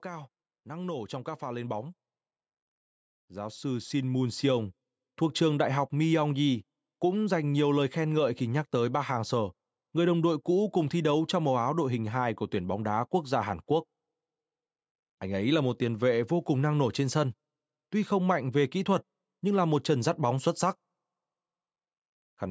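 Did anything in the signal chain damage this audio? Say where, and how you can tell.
Yes: automatic gain rising in call processing, 0.05 to 2.02 s (about 6 dB) and 3.3 to 4.77 s (about 7 dB, before "thuộc trường đại học"). Background swells gradually with speech, not in a sudden step.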